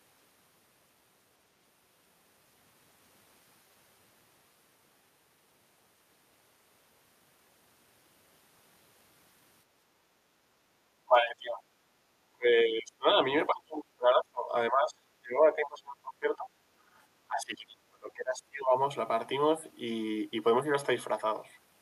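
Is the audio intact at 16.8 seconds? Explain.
No. Background gated by the echo canceller occurs from 16.78 to 16.9 s. While the loudspeaker played, the canceller clamped down on the microphone, so the low room noise dips by about 7 dB for roughly a tenth of a second, then returns.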